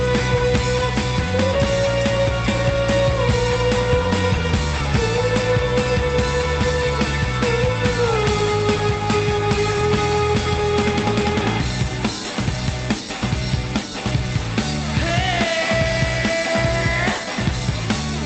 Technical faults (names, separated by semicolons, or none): skip ahead